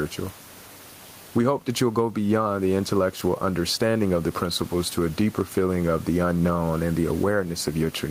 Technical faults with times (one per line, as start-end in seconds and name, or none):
0.00-8.10 gain pumping